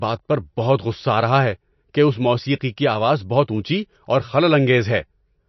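Likely MP3 compression at a very low bitrate, around 32 kbps, throughout the speech: treble stops at 5.9 kHz, and the remaining sound turns watery, swirling and smeared.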